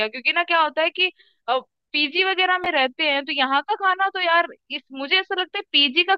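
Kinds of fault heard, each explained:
Chunks out of order: a brief jumbled stutter around 2.64 to 2.66 s, where one 10 ms slice of the speech plays one slot late, after the slice meant to follow it, leaving three abrupt joins but nothing missing.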